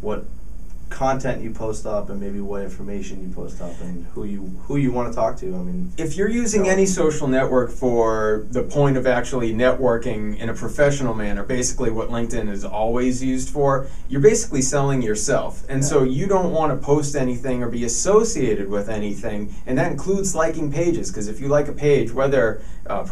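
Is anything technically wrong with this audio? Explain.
No, nothing in this audio stood out as technically wrong on listening.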